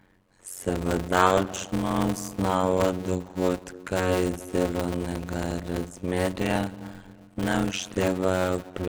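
A speech clip with two problems running the whole way through. The tone is rough and grainy while the full bandwidth stays intact, which is likely Opus compression in its music mode at a low rate, around 24 kbps. On top of that there's a steady buzz at about 91.9 Hz, and everything plays at 0.533 times normal speed. That's a block size mismatch (padded): the sound fits 256-sample blocks being read as 480-sample blocks, with zeros filling the remainder of each one.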